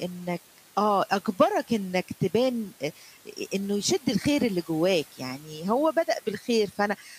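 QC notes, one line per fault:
6.98–7.19 s, speech cut by the noise suppressor: the final fifth of a second sounds swallowed and faint, dropping by up to about 9 dB. The suppressor mistook this quiet tail for room noise, about 21 dB below the speech, and turned it down.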